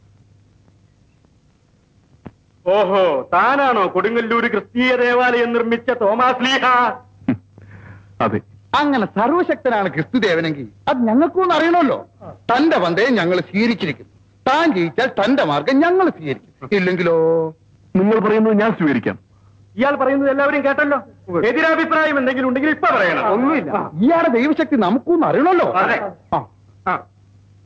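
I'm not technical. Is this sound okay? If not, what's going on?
No. Gain pumping, throughout: loud and soft parts end up closer in level and the sound is squashed, likely because the gain is set too high and a fast limiter keeps pulling it down.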